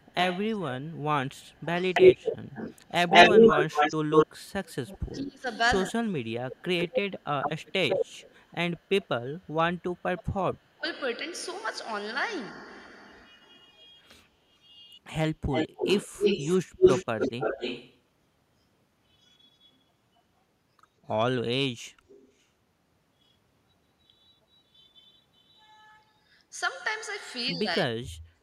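From 0 to 10.89 s there's an echo leak: a copy of the speech trailing 177 ms behind, even louder than the talker, most likely a loudspeaker echo the far end's canceller didn't fully remove. Speech suppressed in double talk cuts in at 4.67–7.13 s and 10.14–10.84 s, with drops of around 25 and 35 dB, likely the canceller ducking its own talker along with the echo. It comes back briefly in 13.36–15.48 s, for only about 0.2 s. The echo returns at 254 ms, about as loud as the speech at 15.51–17.99 s, then faint at 20.16–22.44 s. From 27.5 s to the end the speech drops out deeply, about 40 dB.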